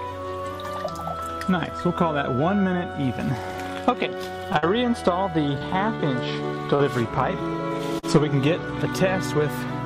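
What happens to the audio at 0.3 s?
Nothing goes wrong at 0.3 s; the audio there plays through cleanly, with no dropout, click, distortion or other audible fault.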